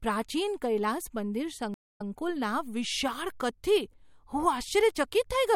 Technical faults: stream reconnect

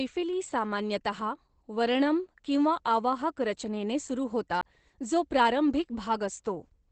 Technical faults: Opus voice compression; CD skip

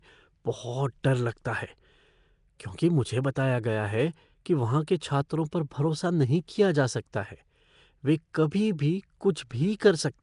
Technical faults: Nellymoser compression

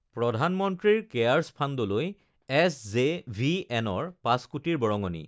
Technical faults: none

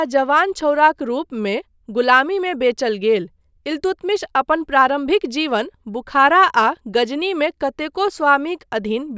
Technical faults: none

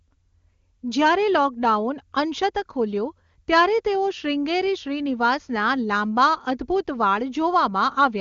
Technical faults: none

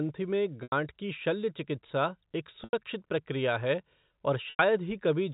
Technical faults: packet loss with pitch repetition

